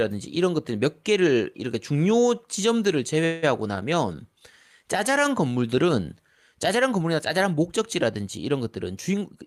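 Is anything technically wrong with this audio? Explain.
Yes, there are two faults.

From 3.25 to 3.44 s there is a call audio freeze: the sound stalls for about 170 ms as the last instant is held as a fading buzz, then resumes with nothing lost, most likely because delayed packets emptied the jitter buffer. A spectrogram shows frozen horizontal bands that fade out.

From 9.12 to 9.43 s there is a jitter buffer speed-up: the receiver cut around 50 ms of pitch periods to reduce its excess delay, so the speech runs at 115% speed with unchanged pitch and sounds hurried. The waveform shows fewer cycles of unchanged length, while spectrogram harmonic spacing stays the same.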